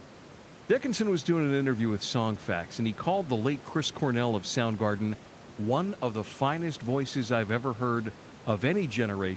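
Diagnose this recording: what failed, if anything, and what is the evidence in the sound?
Nothing failed here: the speech has the usual call-path ceiling with nothing above 8 kHz, and the room noise sits about 21 dB below it, which is just how an ordinary call sounds.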